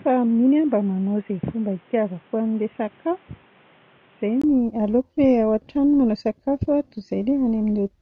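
From the start until 4.44 s the speech sounds dull and boxy, with nothing above 3.8 kHz, somewhat quieter and carrying its own faint background noise. A 20 ms gap follows, then full clarity returns. The likely cause is an input switched to a poorer, narrower-band device, which the system then switched away from.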